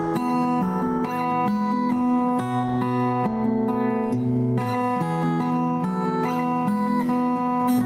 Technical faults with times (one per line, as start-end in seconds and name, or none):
none